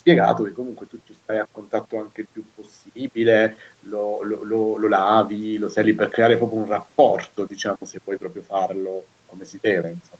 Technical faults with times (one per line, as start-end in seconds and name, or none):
none